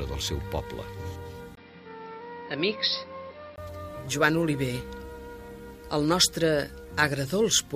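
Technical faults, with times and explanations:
1.55–3.58 s, input switched to a poorer device: the system likely moved to a narrower-band input. After a 20 ms gap, nothing above 5.6 kHz remains, so the sound turns dull, with a new noise floor about 30 dB down and the level roughly unchanged.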